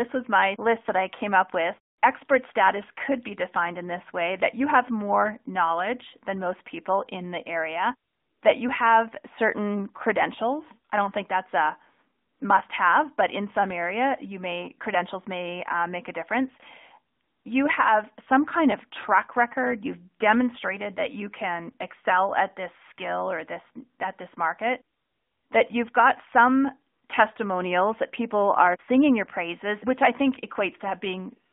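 Throughout, the speech passes through the AMR narrowband mobile codec at a mid-rate mode, around 10 kbps, confining it to roughly 250 Hz to 3.7 kHz with plainly audible buzzy, synthetic coloration. From 21.70 to 21.73 s, a lost AMR speech frame makes the decoder repeat old pitch and vocal tract settings at lower gain, producing a brief dip and warble consistent with one missing 20 ms frame.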